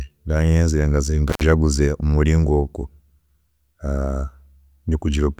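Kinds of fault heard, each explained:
Intermittent contact: a loose connection cuts out for about 107 ms before "mumuringo ogu", leaving a near-flat waveform gap edged by crackle spikes, vertical spectrogram streaks.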